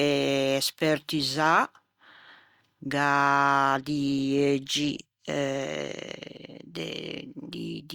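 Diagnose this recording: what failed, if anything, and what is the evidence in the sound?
No stage of the chain, from capture through to playback, leaves any audible evidence of a failure in this speech recording. Nothing in the sound calls for a diagnosis.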